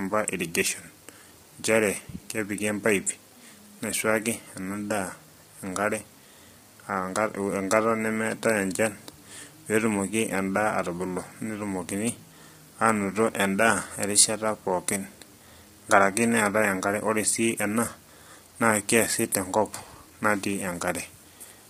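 It's speech, and it sounds rough and grainy throughout, with noise between the harmonics and a synthetic-sounding top band. That's likely heavy low-delay AAC compression at around 24 kbps.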